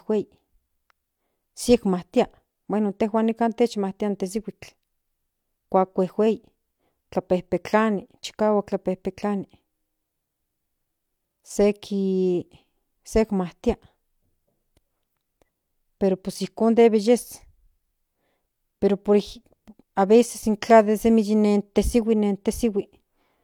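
Nothing stood out on listening to this speech recording.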